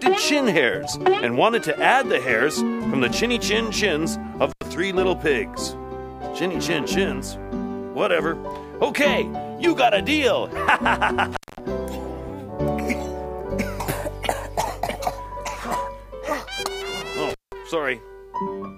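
A loose cable or plug briefly loses contact three times, an intermittent contact fault, cutting the sound out with crackle at each edge. The dropouts fall at 4.51–4.63 s (open about 86 ms), 11.32–11.59 s (211 ms) and 17.30–17.52 s (179 ms), leaving faint hiss.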